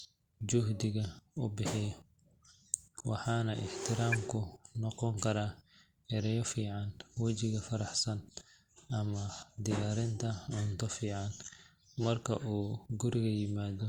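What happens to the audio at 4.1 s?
A brief chirp-like blip of noise cuts through the speech from 4.12 to 4.16 s. It is a corrupt frame decoded: a single compressed frame arrived with flipped bits and the decoder played it anyway, putting energy at wrong frequencies, peaking around -20 dBFS.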